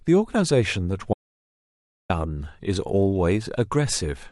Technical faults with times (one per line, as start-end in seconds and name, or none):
1.13-2.10 audio dropout to silence